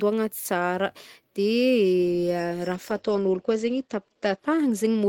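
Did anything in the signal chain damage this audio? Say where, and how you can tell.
Yes: a call bitrate drop at the codec stage, from 2.77 s to the end of the clip. The encoder's rate falls from 32 to 11 kbps and stays at its lowest for 1.36 s, so the speech turns rough and watery and loses its top end. On a spectrogram, energy above 8 kHz vanishes where the coded band previously extended to 20 kHz, leaving a flat ceiling, while coarser quantisation smears the harmonics into blotchy patches.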